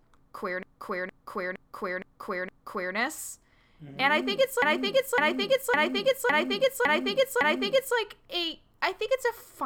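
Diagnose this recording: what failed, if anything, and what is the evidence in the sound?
Repeated frames at the codec or storage stage: a 0.46 s block loops from 0.63 to 2.95 s and a 0.56 s block from 4.62 to 7.97 s, each showing as identical repeating spectrogram patterns.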